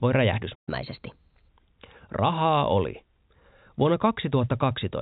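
At 0.55 s the speech cuts out in mid-flow. Silence holds until 0.69 s, a gap of roughly a seventh of a second. This is a playback stall. The likely cause is a player that ran dry of audio data, or whose output thread was held up, so nothing reached the speaker until it recovered. The speech then resumes.

From 0.69 s to 1.49 s comes catch-up at higher speed. The player works off the backlog left by the stall by resampling it faster, at 1.15 times normal speed. Because resampling moves pitch along with tempo, the speech sounds hurried and raised by about two semitones. It has a slightly chipmunk tinge. At 1.49 s the lost time is recovered, and speed and pitch drop back together. Throughout, the audio is band-limited with nothing above 4 kHz, which fits a narrowband G.711 mu-law call path.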